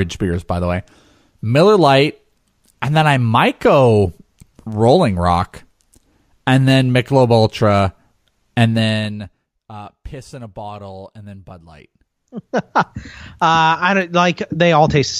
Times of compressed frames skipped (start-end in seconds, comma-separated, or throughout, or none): none